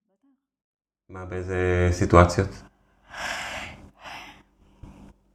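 No technical faults are audible in this speech recording.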